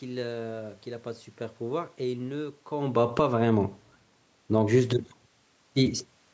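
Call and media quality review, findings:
Automatic gain falling, 2.08–4.74 s: level and room noise sink together by about 7 dB as the AGC pulls gain down. On the waveform, the envelope and noise floor taper together.

Automatic gain rising, 3.30–3.86 s: the AGC pushes gain back up by about 8 dB, so speech and background swell together. Waveform shows a short bulge in amplitude and noise floor.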